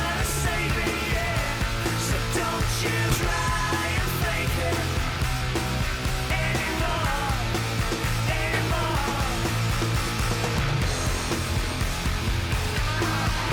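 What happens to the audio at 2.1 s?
Nothing goes wrong at 2.1 s; the audio plays through that moment intact, with no dropout, click, distortion or other fault.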